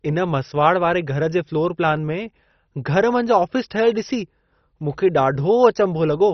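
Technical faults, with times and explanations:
Throughout, MP2 compression: the speech is dull, with nothing above about 6.1 kHz, and carries a heavy gurgling, granular roughness. This likely comes from MPEG Layer II coding starved of bits, which fits a rate near 32 kbps. Upper sub-bands are switched off and the remaining bands are coarsely quantised. A plain low-pass filter would leave the sound clean, and MP3 artefacts tend toward swirling smear. Here the grit sits inside the remaining band.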